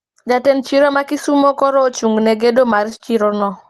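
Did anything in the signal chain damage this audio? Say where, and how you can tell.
Yes, at the network and jitter buffer: repeated stalls (stutter) from 2.57 to 3.61 s, after "kisumo koro ochung ne". The buffer emptied eight times and the receiver held the last sound, so the speech drags briefly.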